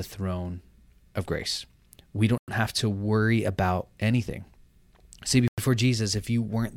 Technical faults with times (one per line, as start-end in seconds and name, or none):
2.38-2.48 gap between chunks
5.48-5.58 gap between chunks